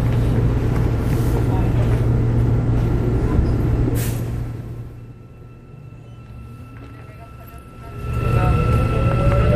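A clip of everyday sounds with zipper noise during two level moves. From 3.84 to 5.18 s the level falls by about 20 dB in audible 2 dB steps, roughly ten a second, giving a slow ticking. From 7.81 to 8.30 s it climbs back by about 20 dB, faster, at around thirty steps a second, so the ticks blur into a zip. Each unsmoothed step is a tiny discontinuity. On a waveform the envelope forms a staircase, and a spectrogram shows a comb of thin vertical broadband lines, one per step.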